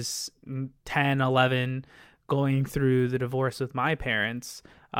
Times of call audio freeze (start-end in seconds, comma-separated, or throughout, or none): none